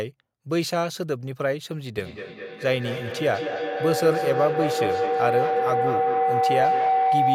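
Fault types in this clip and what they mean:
feedback howl: a room loop gaining level each pass. From 1.98 s a tone near 700 Hz builds, pulsing about five times a second, growing where echo would decay.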